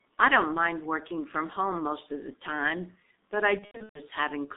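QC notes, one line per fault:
Throughout: G.723.1 codec. The speech is confined to a narrow telephone band, roughly 200 Hz to 3.7 kHz, with nothing above it. At about 6.3 kbit/s the codec works in 30 ms frames and refreshes its vocal-tract model only slowly, which leaves the voice muffled and hoarse and smears consonants into one another. The coding damage is heavy.
3.59 to 4.01 s: VoIP packet loss concealed by the speech codec. About 270 ms of audio is missing in gaps scattered over roughly 360 ms, the longest single dropout lasting 120 ms. Across each gap the decoder repeats its last pitch and spectral shape at falling gain, so the speech is stretched into a buzzy tone or coloured noise that fades, and in the longest dropout it mutes from the third lost frame. Because each frame is built on the one before, the sound stays thin and distorted briefly after packets return.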